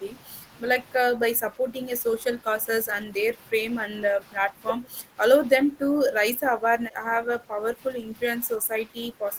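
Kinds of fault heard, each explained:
Speech suppressed in double talk: the speech repeatedly sinks and sounds pulled back, by up to about 10 dB, in eight stretches starting near 1.12, 2.22, 3.06, 3.89, 4.4, 5.62, 6.33 and 8.6 s. The longest runs from 6.33 to 8.16 s, and the last lasts to the end. The likely cause is an echo canceller that, with both ends talking at once, could not tell this talker from loudspeaker echo and turned both down.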